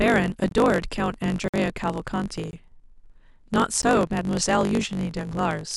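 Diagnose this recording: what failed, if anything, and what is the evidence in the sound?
A block size mismatch (truncated) in the driver or buffer stage runs through the whole clip. A steady buzz at 50 Hz sits under the speech, and the speech runs about 1.07 times fast while keeping its timbre. One stage writes longer blocks than the next reads, which fits a 512-sample block, so the tail of each is discarded. Each cut sets the buzz rate and shortens time. A resampling error would shift pitch along with speed, but here the timbre stays.

Blocks of digital silence, also at the buffer stage, cut the sound out with no fade. They fall at 0.49 to 0.51 s (21 ms), 1.48 to 1.54 s (55 ms), 2.51 to 2.53 s (21 ms) and 3.82 s (14 ms). The 21 ms gaps fit a 1024-sample buffer that wasn't filled in time. Network packet loss would usually be smoothed or filled by concealment, but these holes are plain silence with abrupt edges.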